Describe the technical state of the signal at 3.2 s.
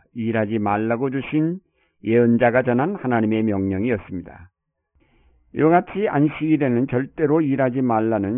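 At 3.2 s, as throughout the clip, there is aliasing: the sound appears to have been resampled down to about 6 kHz with no anti-alias filter, so content above 3 kHz folds back below it. Sibilants turn gritty and metallic, with the spectrum pressing hard against 3 kHz.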